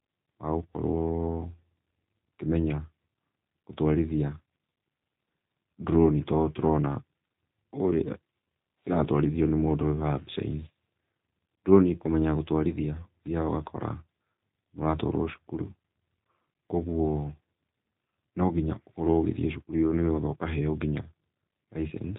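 From start to finish the speech carries the sound of a G.729 codec, and it's plainly audible. Everything above 4 kHz is gone, so it's dull and boxy. The voice is rebuilt from a vocal tract filter, a pitch guess and a few pulses per short frame, which leaves it slightly rough and synthetic. That fits the low-rate G.729A flavour at around 8 kbit/s.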